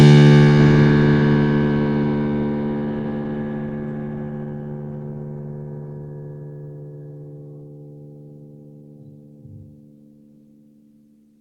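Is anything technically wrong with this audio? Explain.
Yes, there's a call bitrate drop in this music from 2.88 s to 7.29 s. The call's bandwidth estimate fell, so the encoder had to squeeze the music into far fewer bits, which fits a fall from 32 kbps to about 18 kbps, sitting at the bottom for about 2.6 s. Coarser coding plus lost top end makes the music go rough, watery or muffled until the bitrate recovers.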